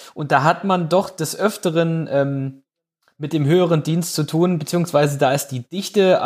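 Nothing stood out on listening to this speech clip.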